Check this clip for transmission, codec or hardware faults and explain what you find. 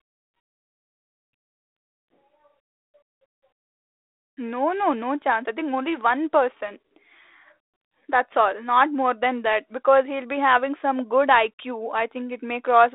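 No faults found: the speech comes over a 32 kbit/s G.726 ADPCM telephone path limited to about 300 Hz to 3.7 kHz, carrying only the light coding grain that rate leaves.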